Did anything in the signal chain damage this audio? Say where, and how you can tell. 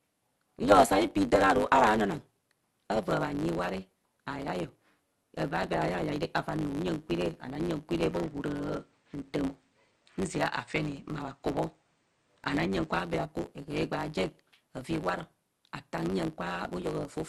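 Yes. A steady 100 Hz buzz runs through the whole clip, and the speech moves about 1.09 times too fast while its timbre stays the same. This is a block size mismatch (truncated) at the driver or buffer stage: each block is written longer than the next stage reads, its tail is discarded, and the buzz sits at that block rate.

From 8.02 s to 12.99 s the speech turns duller. Its level shifts by about 5 dB, and a faint new background noise appears, with no silence at either boundary. The likely cause is the input switched to a poorer device, a narrower-band microphone path with its own tone and noise, before it returns to the original input.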